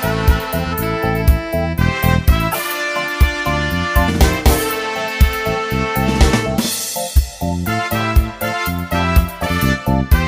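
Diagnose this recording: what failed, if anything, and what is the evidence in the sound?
Three brief glitches break through the audio: one from 2.51 to 2.55 s, a shorter blip at 7.15 s, and another from 9.45 to 9.47 s. The failure sits at the codec stage, from damaged data in a compressed stream. At each point the bytes reaching the decoder were wrong, so it misread those frames and lost sync while it hunted for the next valid frame header, leaving a short burst lasting a few tens of milliseconds.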